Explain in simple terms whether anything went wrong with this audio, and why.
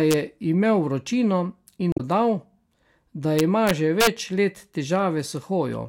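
Two kinds of fault can be heard in this speech.

The first is integer overflow. It happens from 0.11 to 0.14 seconds, and again from 3.39 to 4.07 seconds. The sound got louder than the numbers could hold. Instead of stopping at the top, the loudest moments wrapped around to the opposite extreme. That makes harsh, violent cracks on the loud parts. They are much sharper than ordinary distortion. The second stretch is longer and pushed further past the limit, so it cracks more.

The second fault is damaged data in a compressed stream. It happens from 1.90 to 2.01 seconds. Part of the compressed audio was corrupted. The player could not read that piece correctly. It lost its place and hunted for the next readable chunk. You hear a short chirp or blip there, and the sound may jump slightly ahead.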